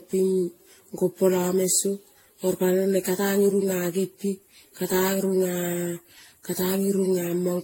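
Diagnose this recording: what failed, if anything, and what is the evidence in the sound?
Throughout, the speech sounds swirly, smeared and hollow, consonant onsets blur, and nothing reaches above 16.5 kHz. This is codec-stage generation loss: the audio was likely re-encoded around ten times with AAC-LC near 64 kbit/s, each pass compounding quantisation noise and spectral holes.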